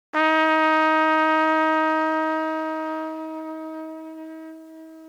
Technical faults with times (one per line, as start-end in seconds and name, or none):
0.00-5.08 low bit depth without dither